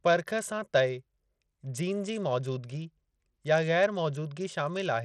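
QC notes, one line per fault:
Throughout, Bluetooth SBC compression likely causes the treble in the speech to flicker in and out, with gritty noise and aliasing riding on it, consistent with a starved bit pool near 80 kbps. A spectrogram shows patchy, blocky high bands and ragged upper harmonics.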